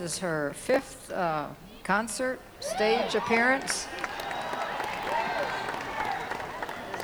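Processor overload crackle appears from 0.70 to 0.87 s and again, longer and denser, from 4.84 to 5.09 s. Many tiny buffers, around 1.5 ms each, miss their deadline and are skipped, so the gaps form a gritty tearing burst rather than one clean dropout or isolated click.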